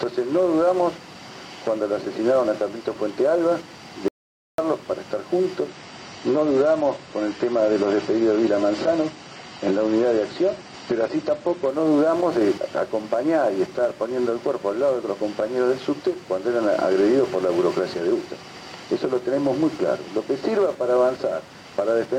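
At 4.08 s the audio cuts out abruptly and returns at 4.58 s. This is an audio dropout to silence. For about half a second there is silence, with no room tone. The input was likely lost while silence kept being written.

From 5.68 s to 11.68 s the treble vanishes. Nothing remains above 9 kHz, and codec artefacts grow. The change is sudden, with no gap. This points to an adaptive stream at a lower bitrate, stepping down from AAC at 96 kbit/s to 32 kbit/s.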